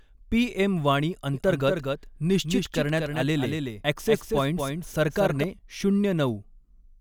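From 1.34 s, just after "पीएम वाणी", until 5.44 s, a doubled audio track runs: a full-band copy trails about a fifth of a second behind, a few dB quieter. It likely comes from a second, slower capture path. Unlike echo, it has no decay or room colour and cuts in and out abruptly.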